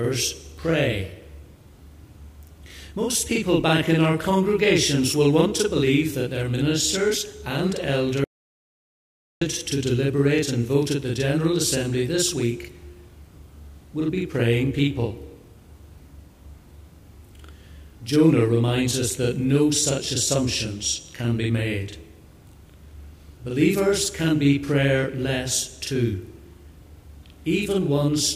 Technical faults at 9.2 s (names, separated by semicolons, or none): channel delay (doubling); audio dropout to silence